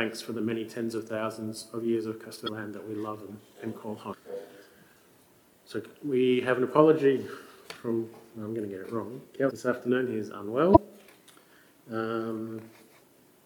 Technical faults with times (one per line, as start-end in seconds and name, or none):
2.44-2.49 damaged data in a compressed stream
4.09-4.13 damaged data in a compressed stream
9.47-9.51 damaged data in a compressed stream
10.72-10.77 damaged data in a compressed stream
13.00-13.04 damaged data in a compressed stream